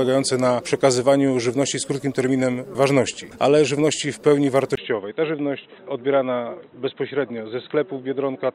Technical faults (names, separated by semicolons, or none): input switched to a poorer device